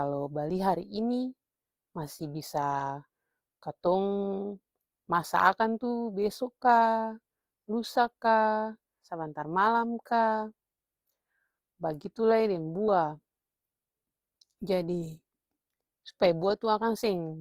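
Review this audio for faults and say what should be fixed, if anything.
Opus compression, likely near 24 kbps in music mode, runs throughout. The speech turns grainy and rough rather than swirly like MP3, because starved bands are noise-filled instead of emptied. Encoding at a higher bitrate, or working from the uncompressed source, would prevent it.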